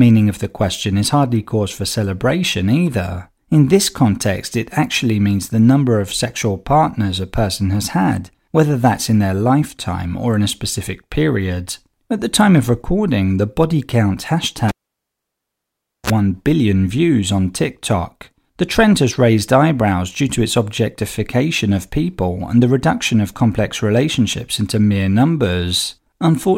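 Right after "recording the body count" at 14.69 s, the cable gets pulled and plugged in: a pop, about 1.36 s of near silence, a 35 ms burst of 60 Hz buzz, then another pop before "billion views on" at 16.10 s.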